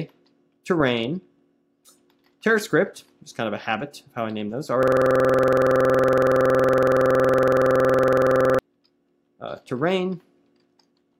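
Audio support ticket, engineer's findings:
System hang loop, 4.83 to 8.59 s. One 46 ms slice of audio repeats exactly, about 80 times. Heard as a rough machine-gun stutter at 21.5 Hz. Probable component: host or audio driver stalled while the interface kept replaying its ring buffer. Loop length fits a 2048-sample buffer. Playback resumes after 8.59 s.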